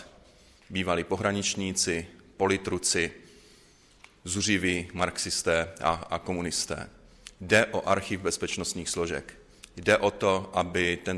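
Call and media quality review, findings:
No audible faults found in the audio.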